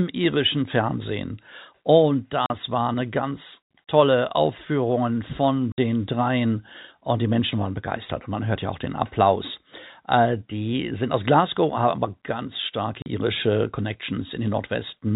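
Three short dropouts cut into the speech, classic packet loss filled with silence. At 2.46 s a 40 ms hole lands right before "war eine ganz tolle". At 5.72 s a 60 ms gap sits just ahead of "dreien und die". At 13.02 s another 40 ms gap follows "haben aber ganz starke". The receiver dropped in dead air where audio went missing, so each gap starts and stops abruptly. The lengths step in 20 ms units, which fits 20 ms packets on this narrowband G.711 line.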